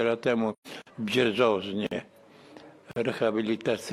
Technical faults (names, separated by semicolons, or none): AAC frame loss with muting; gap between chunks